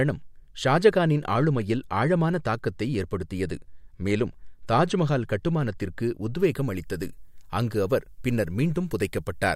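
From 6.39 s, right after "ஏற்படுத்தியது மேலும் தாஜ்மஹால் கட்டுமானத்திற்கு", through to the end, the speech has pre-emphasis left on. It's a treble lift matching the FM 50 µs curve, and the de-emphasis that should undo it never got applied. That leaves 10 kHz about 10 dB hot relative to 1 kHz, so it sounds thin, bright and hissy on the sibilants.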